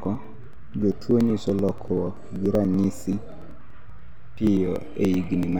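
Speech, with periodic USB or driver dropouts: something blocks the audio path every 0.096 s from 0.05 to 5.53 s, skipping a few milliseconds each time, so regular ticks run through the talking.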